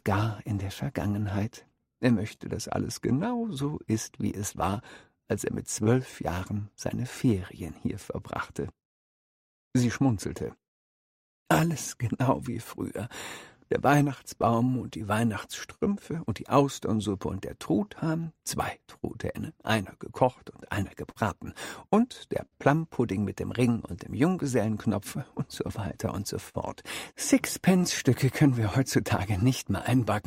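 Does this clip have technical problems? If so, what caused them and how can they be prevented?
Yes. The audio drags slightly and hiccups at uneven intervals all the way through. This is clock drift between sender and receiver. The sender's clock runs about 4 percent slow, so the receiver's jitter buffer keeps draining and must be refilled. Using a shared reference clock, or resampling to match the sender's actual rate, prevents this.

From 0.53 to 29.96 s, repeated timing corrections leave the sound playing at 98 percent speed. The receiver keeps stretching or repeating short pieces to keep up with the slow sender, adding roughly 0.7 s in total. Adaptive resampling that spreads the correction smoothly would make these edits inaudible.

From 5.84 to 5.87 s, one sound is held too long, with a faint buzz or dip. This is a short stall from a late packet. The buffer ran empty, so the receiver extended the last sound by 19 ms and then resumed where it left off, with nothing lost. 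A slightly deeper jitter buffer would absorb this delay.

Brief ticks and smears occur as scattered short gaps between 0.21 and 2.42 s, 13.61 and 15.83 s, and 18.97 and 29.20 s. Packets arrived late or not at all here, about fourteen in total, and none of the holes was longer than about 50 ms. Each hole was covered by continuing the previous sound. A more stable network path and forward error correction would reduce these gaps.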